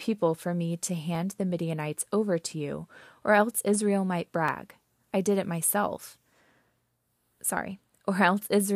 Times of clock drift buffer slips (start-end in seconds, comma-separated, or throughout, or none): 1.15-7.82